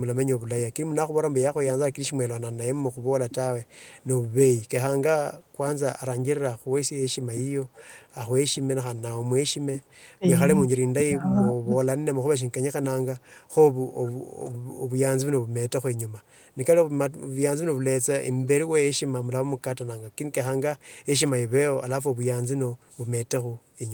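A far-end echo canceller likely let residue through, producing echo leak: faint copies of the speech, delayed about 441 ms, at 3.65–4.04 s and, about 10 dB louder, 7.73–7.85 s. Speech suppressed in double talk follows, likely from the canceller ducking both talkers at once: the speech drops by roughly 25 dB at 10.18–10.24 s and again through 10.77–11.73 s.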